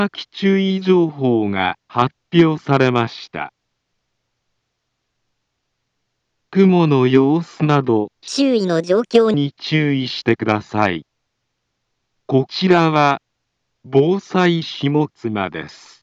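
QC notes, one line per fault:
8.28–9.34 s, section at the wrong speed: plays 1.44 times fast, so pitch rises roughly seven semitones and timing hurries together, unlike a pitch-only shift; likely a mismatched playback clock.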